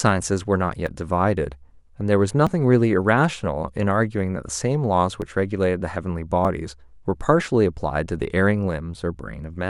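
At 0.87, 2.47, 5.22 and 6.45 s the speech jumps forward, the likely result of a dropped buffer (overrun): a few milliseconds of samples were overwritten before being read, and the audio on either side was butted together. The losses are very short, well under 10 ms. On the waveform each shows as a sudden step with no gap. On the spectrogram it appears as a thin vertical broadband line.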